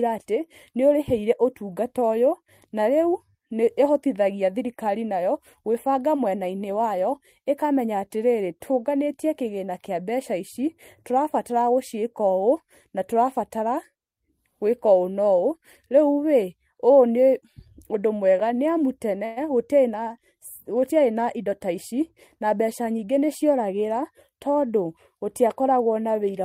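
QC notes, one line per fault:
19.25–19.38 s, call audio freeze: right before "gũtiarĩ na gũtiarĩ na" the speech hangs for about 0.11 s, with the last bit of sound stretched into a short buzzy tail that fades but never drops to silence. The likely cause is delayed packets draining the jitter buffer, so the receiver padded the gap with that fill. When audio resumes it picks up where it left off, so nothing is lost. It just lands about 111 ms later than before.
21.37–22.00 s and 22.44–23.19 s, jitter buffer speed-up: starting just after "gũtiarĩ na gũtiarĩ na", two stretches of speech run at about 107% speed with the pitch unchanged, so they come across a bit rushed. The buffer was sitting on more audio than it wanted, probably the backlog from that freeze. To catch up, the receiver trimmed tiny pitch-period-sized slivers over and over, shaving roughly 50 ms off each stretch.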